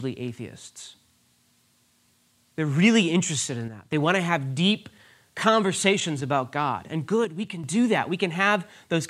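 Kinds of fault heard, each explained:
One channel drops out: the speech level falls abruptly by about 6 dB twice, from 3.68 to 3.92 s after "really interested in" and from 7.25 to 7.64 s before "do that", likely because one stereo channel briefly vanished before the mono sum.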